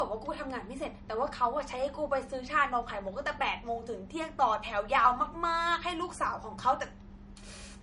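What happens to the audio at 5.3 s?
At 5.3 s the speech carries the low-bitrate audio saved at a high bitrate fault, present throughout the clip. Nothing exists above 10.6 kHz, which a spectrogram shows as a flat, empty ceiling, and the dull coding artefacts fit a likely low-bitrate MP3 later re-encoded generously.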